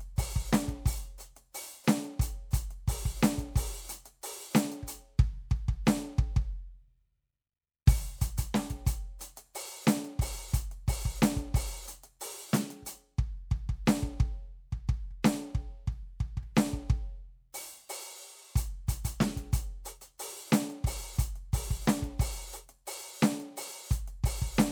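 No technical faults can be heard anywhere in this music. There is nothing in the audio that needs a timestamp or an account of what went wrong.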